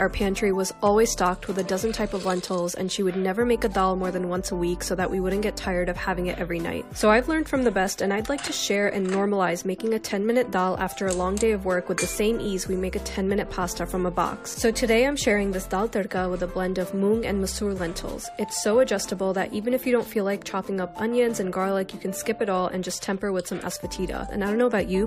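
No faults are audible anywhere in the recording.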